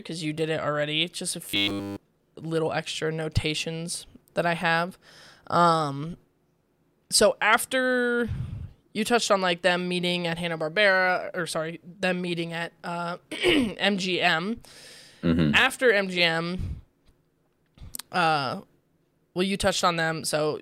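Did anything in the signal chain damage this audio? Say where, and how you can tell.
Yes. Robotic sound from repeated short buffers, 1.46 to 1.97 s: the speech turns into a rigid metallic buzz at 100 Hz throughout that stretch. The likely cause is a starved driver buffer replaying its last 10 ms over and over while fresh audio was skipped.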